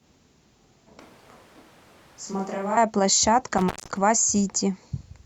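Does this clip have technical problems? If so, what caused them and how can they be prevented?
Yes. From 1.00 to 2.77 s the speech turns suddenly hollow and roomy, about 10 dB quieter with a noisier floor, most likely a switch to a distant microphone. The waveform shrinks abruptly and the spectrogram loses low end and gains diffuse haze. Monitor the close microphone and check its transmitter or cable before recording.

An intermittent contact at 3.58 to 3.97 s opens the line for about 0.16 s, with crackle at each edge. The waveform shows clicks around a near-flat gap, and the spectrogram shows vertical streaks bracketing a faint noise band. Secure and test plugs and cables before recording.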